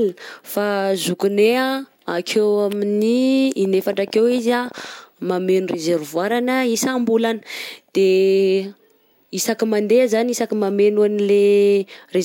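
Speech with a train of clicks from 3.65 to 4.86 s, starting just after "akeo amin'ny": around twenty same-shaped ticks at about 15 per second, unevenly spaced and peaking roughly as loud as the speech. Their matching shape sets them apart from random crackle. The likely cause is interference from nearby equipment or a faulty connection or power supply.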